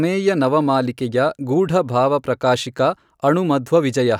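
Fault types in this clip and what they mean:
No technical fault can be heard anywhere in the speech. Nothing in the recording calls for a fault description.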